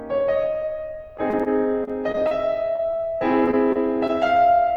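Repeated packet loss (robotic sound) chops the music at 1.17–1.48 s, 1.84–2.33 s and 2.76–4.11 s. Short dropouts, up to about 33 ms, are patched by repeating sound, giving a choppy stutter.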